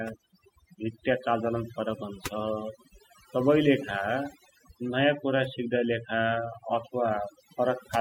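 Overdone noise removal runs through the whole clip. A noise reducer set too hard pushes individual frequency bands down or out whenever they sit near its noise estimate, so the background drops and breaks up into twinkling specks, and quiet parts of the speech go with it.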